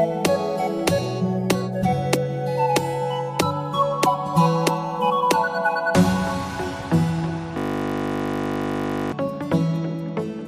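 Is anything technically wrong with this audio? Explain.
Yes. From 7.58 to 9.12 s a system hang loop repeats one 20 ms piece 77 times, so the frozen system's buffer cycling produces a steady 50 Hz buzz.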